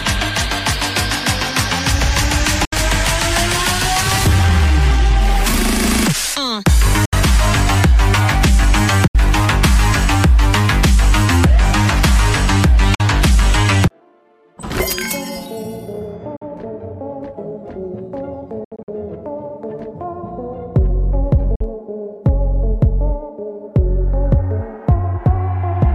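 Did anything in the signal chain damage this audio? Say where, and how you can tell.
Yes: silent holes at 2.65, 7.05, 9.07, 12.95, 16.36 and 21.55 s, plus scattered gaps from 18.64 to 18.88 s, are likely Bluetooth dropouts in playback. About 46 to 70 ms is lost each time at the single holes, which fits two or three late packets, and about 139 ms over six packets in the scattered stretch, and the sound resumes as if it had played on.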